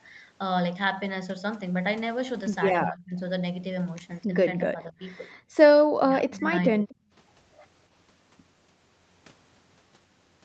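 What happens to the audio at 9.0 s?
Nothing goes wrong at 9.0 s: the speech carries on intact there, with only the normal band limit of the call path, which leaves nothing above about 8 kHz.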